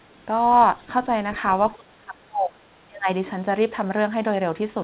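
From 1.76 to 3.08 s the speech is pulled down in level. It does not fade smoothly. It dips and drops out in pieces, about a second of it in all. At its deepest it falls by roughly 25 dB. This is likely speech suppressed in double talk. The echo canceller could not tell the near talker from the returning echo. It then attenuated everything. Like the rest of the clip, this stretch is band-limited with nothing above 4 kHz.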